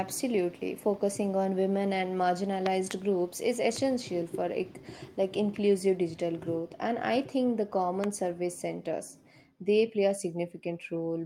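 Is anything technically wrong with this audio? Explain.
Yes. Loud pops land at 2.66–2.93 s (a double, after "on women and"), 3.76–3.79 s (after "groups is") and 8.04–8.06 s (before "service centers they play"), each well above the speech. They are likely voltage spikes from a switch, plug or static, heard as sharp thumps over continuing speech, showing as tall waveform spikes and full-height vertical spectrogram lines.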